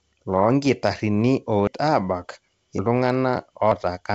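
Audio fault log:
1.67 s, 2.79 s, 3.72 s: dropped buffer (overrun). Samples were likely overwritten before being read, losing about 200 ms, then about 100 ms twice. At each splice the speech jumps ahead.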